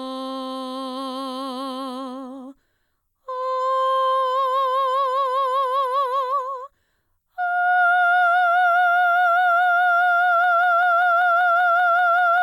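A broken-record loop begins at 10.44 s in this music and lasts to the end: a 194 ms fragment repeats exactly, back to back, ten times. Playback or streaming likely stalled on its last held fragment, so the intended music there is lost.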